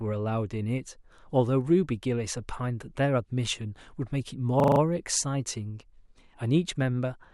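At 4.6 s to 4.8 s the speech hits a system hang loop: a frozen driver replays one 40 ms buffer five times, a 25 Hz stutter.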